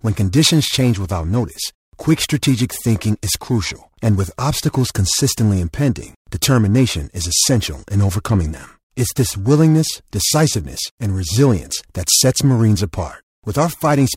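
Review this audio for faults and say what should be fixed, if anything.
The converter's sampling clock is being shaken by interference at a single rate, around 1.5 kHz, for the whole clip: periodic clock jitter. Each sample lands slightly early or late in a repeating pattern, so every component of the speech picks up sidebands spaced about 1.5 kHz above and below it, strongest on the higher frequencies. The result is a rough, metallic edge riding on the voice that disappears in the pauses. To prevent it, give the converter a clean, well-isolated clock source with proper power-supply filtering and shielding from nearby interference.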